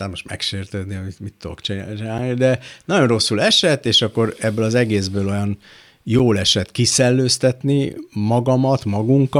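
Two brief hard-edged dropouts of about 7 ms break the speech at 2.18 s, between "megsértődni amit mit tudok" and "de nagyon rosszul esett", and at 6.19 s, just before "esett kiszellőztetni". Both are a gap between chunks, with silence inserted at joins every 4 s.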